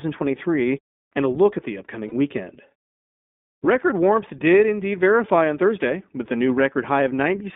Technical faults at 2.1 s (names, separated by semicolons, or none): iLBC codec; lost iLBC frames